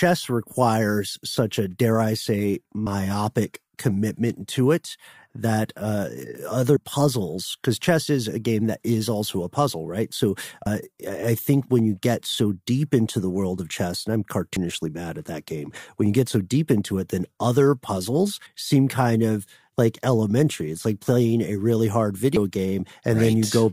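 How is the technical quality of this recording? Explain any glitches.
The recording has regular skips in the speech. Audio missing between chunks at 2.86, 6.76, 10.66, 14.56, 18.46 and 22.36 s: the processor likely drops roughly a tenth of a second at each 4-second chunk changeover, so the speech jumps abruptly forward.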